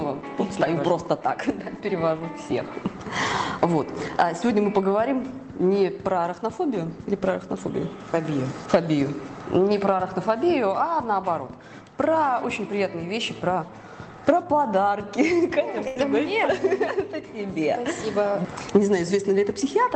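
At 15.87 s the audio briefly stalls: the last sound is stretched into a held, fading tail for roughly 0.1 s, and when playback resumes at 15.97 s about 80 ms of material is simply gone. This is a burst of packet loss on a WebRTC call path with Opus coding and a top end cut at about 8 kHz. Consecutive packets arrived too late or not at all, so the receiver concealed the gap by extending and attenuating the preceding sound for about 76 ms, then skipped ahead.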